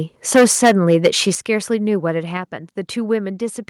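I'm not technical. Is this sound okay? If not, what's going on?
No. From 0.35 to 1.08 s the speech has a harsh, crackly edge on its loudest parts. This is microphone overload: the input was likely set too high, so the strongest peaks, about a tenth of the sound, got their tops sliced off.

There are also sudden drops in loudness at 0.36, 1.35 and 2.37 s, with the second drop the biggest. This is microphone volume stepped down: the call software likely reacted to the overly loud input by turning the microphone level down in abrupt steps.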